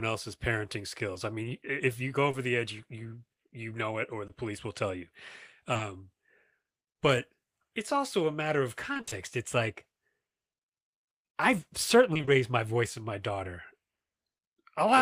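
A speech recording with brief smears or wobbles at 1.13, 2.31, 4.27 and 5.73 to 5.81 s: short concealed packet loss, where the receiver patched each missing 20 ms by extending the preceding sound. At 8.93 to 9.13 s and 12.13 to 12.29 s the sound turns choppy and robotic. This is repeated packet loss, with gaps of up to 20 ms recurring so closely that about half of each stretch is concealment rather than real audio.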